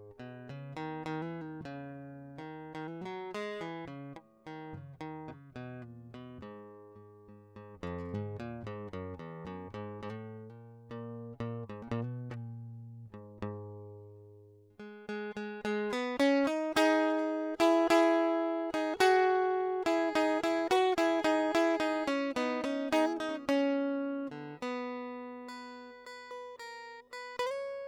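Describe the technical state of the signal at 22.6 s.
At 22.6 s the music plays through intact, with no dropout, distortion or other fault to be heard at that point.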